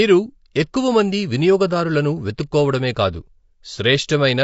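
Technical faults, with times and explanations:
Throughout, low-delay AAC compression: the speech is plainly rough and grainy, with noise filling the gaps between pitch harmonics. This is likely AAC-ELD at a rate that fits about 32 kbps. Its coarse quantization of about 500 frequency lines a frame at this low rate produces a steady graininess rather than smeared pre-echo around attacks.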